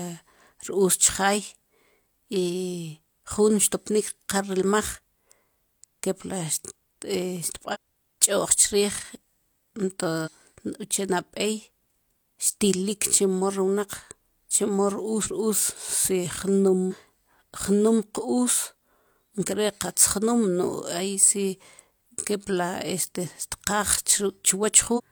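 Short blips at 7.70, 10.22, 15.21, 16.88 and 24.94 s, each about 0.06 s, are damaged data in the compressed stream: corrupted frames the decoder misreads before resyncing.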